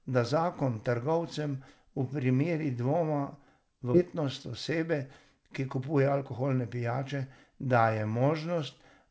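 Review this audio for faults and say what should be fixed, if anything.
At 3.94 s, queued audio was dropped while later audio was already waiting, a skip ahead: roughly 0.7 s of speech vanishes and both sides join with no gap. From 4.16 to 7.22 s, the jitter buffer speed-up trimmed pitch periods to drain excess delay, so speech plays at 107% with unchanged pitch, about a fifth of a second shorter and noticeably hurried. The G.722 call path limits everything to below 8 kHz. To prevent both faults, smooth packet arrival upstream and let the jitter buffer grow its target delay adaptively instead of overflowing and then compressing playback.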